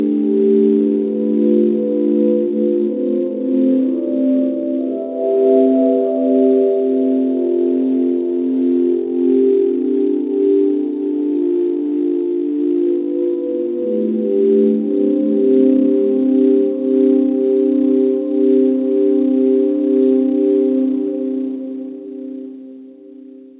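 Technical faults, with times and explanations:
No faults: the sound comes over a normal WebRTC call path, and the absence of anything above 4 kHz fits a 64 kbps G.711 mu-law codec.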